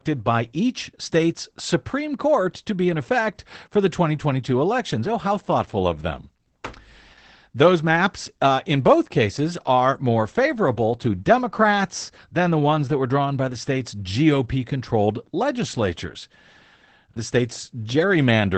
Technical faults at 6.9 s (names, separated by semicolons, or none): Opus voice compression